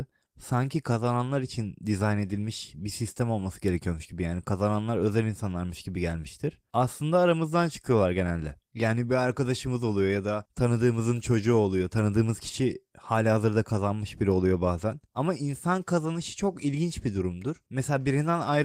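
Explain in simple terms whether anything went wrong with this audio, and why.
Nothing went wrong here; no faults turn up.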